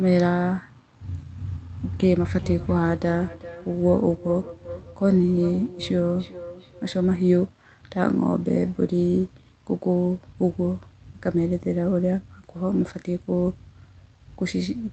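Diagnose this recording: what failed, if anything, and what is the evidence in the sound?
From 1.28 s to 7.2 s, the speech returns as thinner, ringing copies roughly every 0.4 s, peaking at about 16 dB below the talker. This is feedback echo between two devices, a call-processing fault. A nearby second device replays the call, that microphone recaptures it, and no echo canceller removes sound played by another device.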